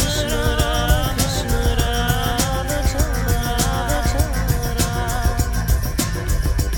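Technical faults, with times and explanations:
Throughout, doubled audio track: an equally loud, full-band copy trails by about a second with no decay or room colour, unlike an echo, likely from a second capture path.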